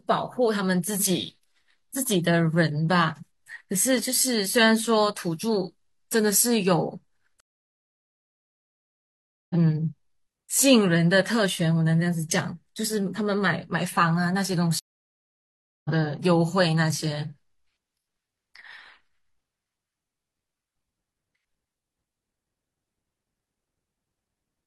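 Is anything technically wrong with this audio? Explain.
Yes, there are two stream reconnects in this speech. From 7.40 to 9.55 s the sound drops out for 2.10 s, and from 14.79 to 15.90 s for 1.06 s. Each time the connection broke and a fresh decoder restarted mid-stream, so the speech resumes later, by roughly two seconds and one second, with a brief muted or faded onset.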